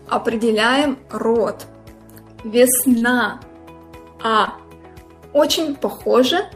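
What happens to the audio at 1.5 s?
Nothing goes wrong at 1.5 s; the audio plays through that moment intact, with no dropout, click or distortion.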